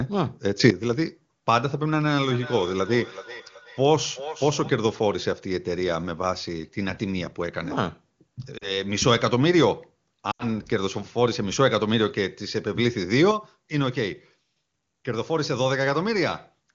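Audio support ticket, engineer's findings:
Level jump up about 10 dB at 0.60 to 0.70 s, sound and background together. Sudden gain jump, likely a gain step applied without a ramp.

Feedback echo between two devices, 2.21 to 4.79 s. Repeats roughly every 0.4 s, peaking about 14 dB under speech. A second device's playback is re-captured, outside the echo canceller's reach.

Lost AMR speech frames at 8.57 to 8.77 s and 10.31 to 10.44 s. Gaps of 40 ms and 80 ms fit two and four dropped 20 ms frames. The decoder concealed them by fading to near silence within two frames, and the sound returned weakened. AMR-WB at 23.85 kbit/s sounds clean around these gaps.

Level drop of about 6 dB from 13.31 s to the end, background included. Sudden gain jump, likely a step with no ramp.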